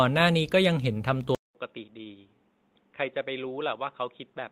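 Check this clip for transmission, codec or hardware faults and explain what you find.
Two faults are present in this speech clip: a change of input device partway through, and a short stretch rebuilt from error-correction data shortly after it.

At 1.35 s the sound cuts out for about 200 ms. From there to the end it is boxier and quieter, with nothing above 3.8 kHz, a level drop of about 10 dB, and a new low background hiss well below the speech. This is likely an input switched to a poorer device, such as a headset's call profile. A device with a narrower passband and its own noise floor took over from the original microphone. A codec bandwidth drop would not also bring the silent gap, level fall and new noise all at once.

From 1.99 to 2.05 s, about 40 ms sounds grainier and rougher with no gap, which fits two lost packets rebuilt from error correction. Each missing packet was recovered from a low-bitrate copy carried in the next one, so the decoder played a coarser version instead of silence. 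Concealment by extrapolation would smear or buzz. Here the sound continues naturally, only noisier.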